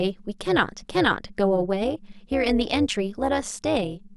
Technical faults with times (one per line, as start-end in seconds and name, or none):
0.00-4.17 overlap-add ripple